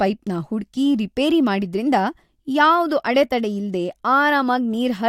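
No technical faults are audible in this speech.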